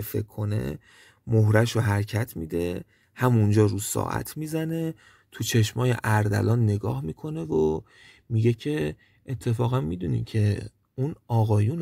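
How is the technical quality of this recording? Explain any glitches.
No glitches or faults heard.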